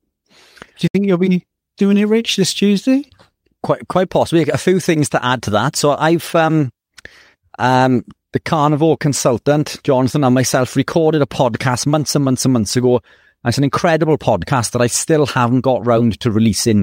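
Digital broadcast dropout, 0.87 to 0.95 s: the receiver muted after losing frames, the speech fading out within 8 ms into a 64 ms silent gap just before "you'll be doing it".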